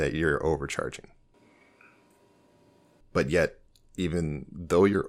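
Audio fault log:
1.34 to 3.00 s, switch to a distant microphone: right after "you're overcharging" the speech turns abruptly roomy and hollow, thinner in the bass, with room noise rising to roughly 25 dB below the speech, though the overall loudness stays about the same. At 3.00 s it snaps back to the close, full sound. The likely cause is that the close microphone's feed dropped out and a microphone farther away, picking up much more of the room, covered that stretch.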